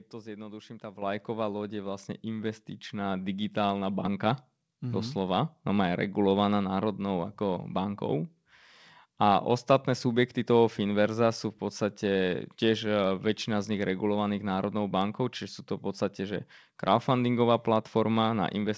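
At 1.02 s, right after "to zjednoduším tá", the microphone volume steps up about 8 dB, then again about 3 dB at 2.04 s after "loď je", voice and background jumping together.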